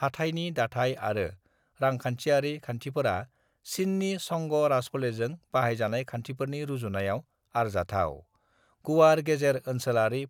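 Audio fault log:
No faults found in the speech in this recording.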